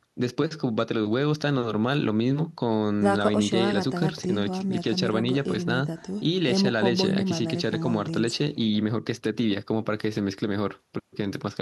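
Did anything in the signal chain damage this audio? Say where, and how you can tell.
No, nothing along the way seems to have harmed this speech, and I can't hear any point where the chain let it down.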